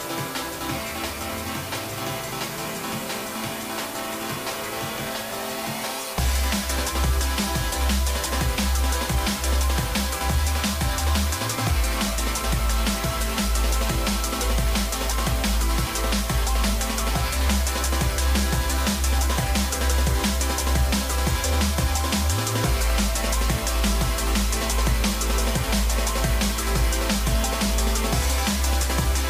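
A constant, even hiss sits under the sound for the whole clip, roughly 15 dB below it, with no distortion. This is low bit depth with dither: the audio was reduced to about 5 bits, and dither turned the rounding error into steady white noise.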